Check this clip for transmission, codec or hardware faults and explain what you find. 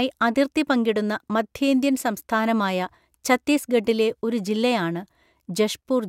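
Nothing to report: no transmission, codec or hardware fault can be heard anywhere in the speech.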